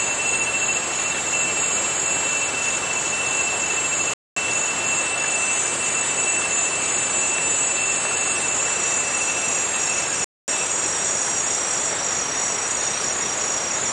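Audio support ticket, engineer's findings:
Playback stall at 4.14–4.36 s and 10.24–10.48 s. Output drops to silence mid-flow for about 230 ms each time, then resumes. Likely cause: player buffer underrun or blocked audio thread starving the output until data returns.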